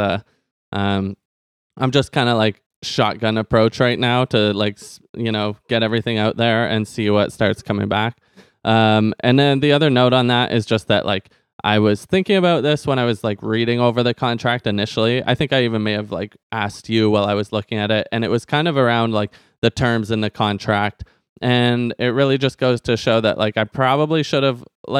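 Nothing goes wrong anywhere in this speech recording, so there are no technical faults to point out.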